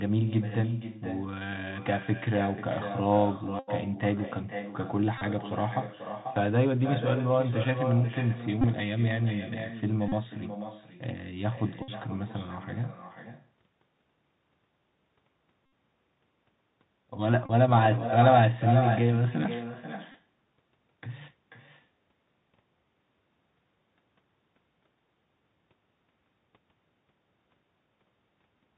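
From start to finish, the speech carries echo with no canceller: a copy about 10 dB quieter trails each phrase by roughly half a second, visible as faint repeated smears on the spectrogram. Throughout, the Bluetooth CVSD headset codec limits the band: the spectrogram is empty above 4 kHz, s sounds turn scratchy, and granular hiss lies under the speech. At 3.59, 5.18, 8.61, 10.08, 11.82, 15.66, 17.46 and 20.12 s, a Bluetooth headset packet is repeated. Each run lasts 23 to 83 ms and buzzes near 267 Hz. The waveform shows a pattern repeating every 3.75 ms, and the spectrogram shows evenly spaced horizontal stripes.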